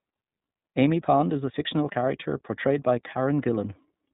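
iLBC codec damage runs through the whole clip. The speech is cut off above 4 kHz and sounds plainly rough and slightly synthetic, because each short frame's excitation is coded on its own. The coarseness fits the 30 ms, 13.33 kbps mode.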